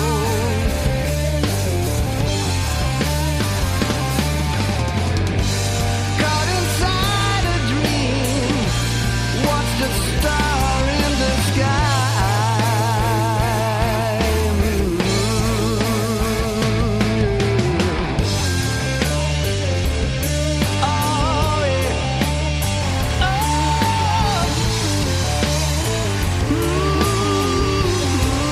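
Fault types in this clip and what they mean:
Timecode bleed: linear timecode leaking from an adjacent feed, a chirping warble near 1 and 2 kHz from 22.8 s onward, about 15 dB below the sound.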